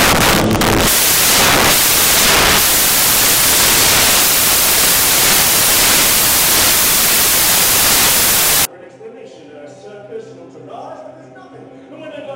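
From the start to 8.65 s the audio is buried under loud, harsh broadband noise: samples built from the wrong bytes. The reader assembles each sample with its bytes misaligned or swapped, so the rapidly changing low-order bits land in the most significant positions and dominate every value. Unlike ordinary hiss or clipping distortion, this noise is not a faint floor or a harsh edge on peaks. It is loud and harsh throughout that span.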